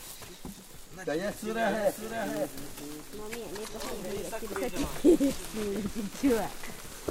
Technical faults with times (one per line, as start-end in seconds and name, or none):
1.68-4.14 doubled audio track